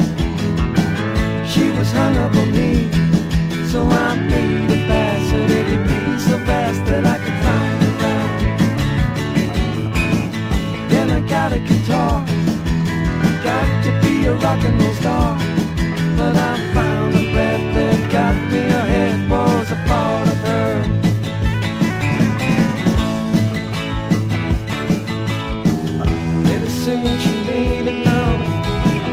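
No technical fault can be heard anywhere in the audio. There are no events to time and no causes to trace.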